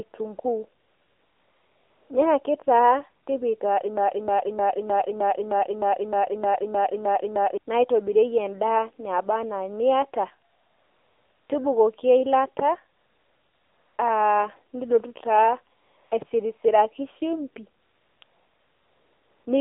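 AMR narrowband mobile codec damage runs through the whole speech clip. At 7.4 kbps the coarse vocal-tract model leaves the voice plainly buzzy and synthetic, and the band is confined to roughly 300 Hz to 3.6 kHz. AMR comfort noise appears at 0.80–2.10, 3.24–3.26, 10.50–11.50, 12.98–13.98, 15.76–16.12, 17.82–18.22 and 18.24–19.46 s. In those gaps speech frames stopped and smooth generated noise switched in to replace the real background.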